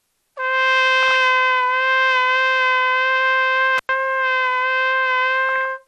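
The whole clip sounds dull, with a gurgling, granular edge. Upper frequencies come and go. This is likely MP2 compression at a low bitrate, plausibly around 80 kbps. Too few bits means upper sub-bands drop out and the remaining bands are coarsely quantised.

From 1.03 to 1.16 s there is DAB burbling. Short blips of noise pop up in single sub-bands. A small share of bit errors has slipped past error correction.

From 3.78 to 3.89 s an intermittent contact opens the line for about 98 ms. The sound drops out, with crackle at both edges and faint hiss in the gap. A loose plug or cable briefly broke the connection.

From 5.49 to 5.65 s the DAB burbling returns. It is the same kind of burbling, spread over slightly more frames. Again, errors in the MP2 data put short blips of noise into single sub-bands.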